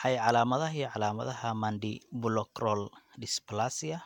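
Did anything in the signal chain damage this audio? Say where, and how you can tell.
No, nothing in the signal chain damaged this audio.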